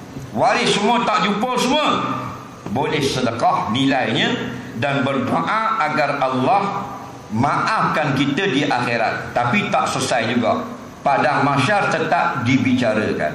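Throughout, the audio sounds watery and swirly with smeared attacks, likely MP3 compression, plainly audible and consistent with a 64 kbps encode.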